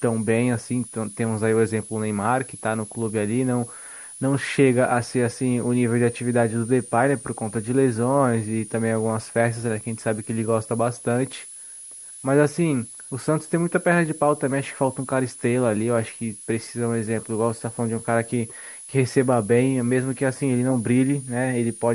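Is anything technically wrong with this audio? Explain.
Yes. A switching supply whistle runs throughout the speech, a high tone drifting between 9.2 and 10.4 kHz, roughly 20 dB below. A power supply is cycling audibly as its load shifts.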